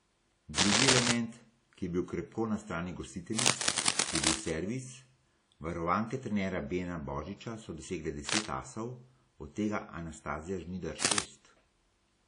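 Throughout the speech, the MP3 carries the smeared, watery texture of a far coarser encode even though its band runs up to 20.1 kHz. This is likely low-bitrate audio saved at a high bitrate, a 32 kbit/s WMA pass re-encoded at 320 kbit/s. Unlike an ordinary low-bitrate file, the generous rate cannot restore what the first codec discarded.

Cable scratch noise appears at 0.58–1.12 s, about 10 dB above the speech, then after "bil krepko na strani" at 3.37–4.51 s, after "božiča so dosegle" at 8.29–8.47 s, and at 11.02–11.23 s, those three about 5 dB up. These are dense, ragged rustling bursts, likely from a worn contact shifting, rather than the single sharp click of a dropout.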